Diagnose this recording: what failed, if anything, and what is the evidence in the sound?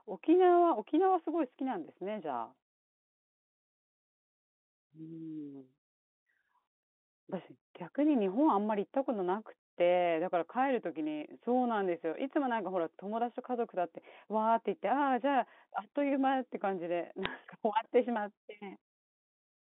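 Bit errors on a digital phone line, at the network stage, show up as a brief burst of corrupted samples between 17.23 and 17.26 s, over the still-band-limited G.711 speech. On a waveform, isolated single-sample spikes jump away from the trace; a spectrogram shows thin vertical broadband lines. Flipped bits in a few mu-law samples, at an error rate of well under one percent, throw those samples to wrong levels.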